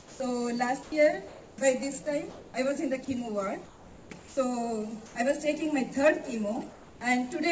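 Right at the start, from 0.0 to 0.20 s, the opening gives way to steady noise, likely sound dropped by the voice detector. The sender judged the start to be background and stopped sending, so about 80 ms of real sound is lost under synthetic fill until the detector triggered again. The same happens at 0.83 to 0.92 s, losing about 60 ms, and at 4.19 to 4.37 s, losing about 80 ms.

Between and after those, the pauses likely carry comfort noise in place of the background at 1.28 to 1.58 s, 2.30 to 2.54 s, 3.65 to 4.10 s, 5.06 to 5.15 s and 6.71 to 7.01 s. The real background, sitting about 22 to 23 dB below the loud parts, is swapped for a smoother generated noise. It's about 2 to 4 dB quieter in most of those pauses but at the same level at 2.30 s. Throughout, nothing comes through above 8 kHz, which fits a G.722 call codec at around 64 kbit/s.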